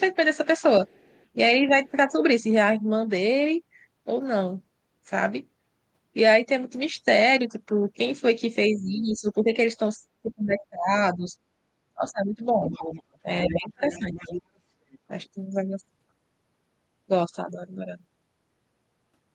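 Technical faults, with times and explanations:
0.88–1.25 s, 8.78–9.19 s and 12.67–14.99 s, other side's voice leaking through: a second voice sits behind the speech, very faint in the first two spots but clearly audible in the last. The likely cause is loudspeaker echo that the echo canceller left in the microphone signal.
1.6–2.16 s, 8.69–11.34 s, 11.94–12.63 s and 13.23–14.14 s, speech suppressed in double talk: the voice dips and drops out in pieces. The dip is slight at first. From 8.69 s it is deep, about 20 to 25 dB, for well over a second in total. This is likely the canceller turning down both talkers at once.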